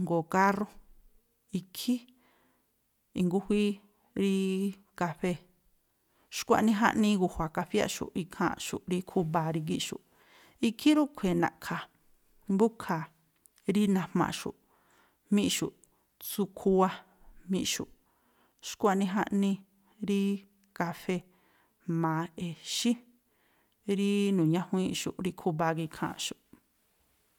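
No technical faults can be heard anywhere in this speech recording. There is nothing to place on a timeline.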